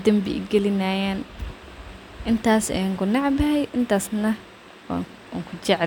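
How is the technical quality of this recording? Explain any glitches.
Nothing in the speech registers as a technical fault, so there are no glitches to explain.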